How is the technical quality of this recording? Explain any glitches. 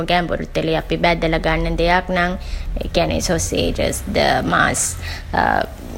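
No technical glitches are audible.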